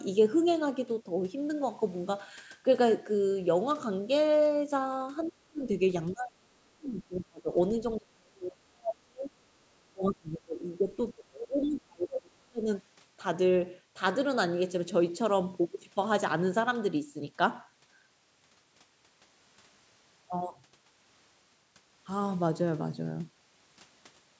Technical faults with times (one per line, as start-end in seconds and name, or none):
5.21-5.31 other side's voice leaking through
5.30-5.64 speech suppressed in double talk
6.11-7.50 speech suppressed in double talk
7.98-9.31 speech suppressed in double talk
9.69-12.68 speech suppressed in double talk